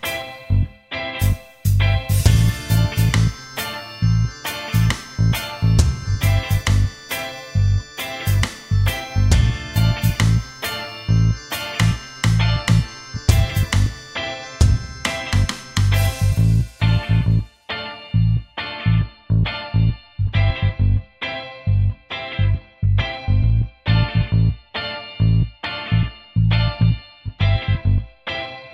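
No technical faults can be heard anywhere in the recording.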